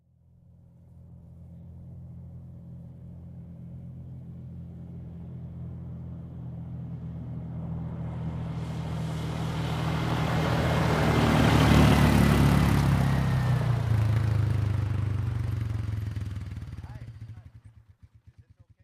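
Nothing stood out on listening to this recording of sounds.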